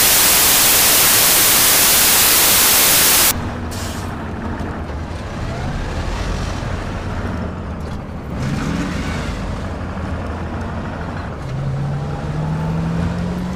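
From the start to 3.31 s the audio is buried under loud, harsh broadband noise. These are samples built from the wrong bytes: each sample's bytes are misassembled, so the rapidly changing low bits dominate every value.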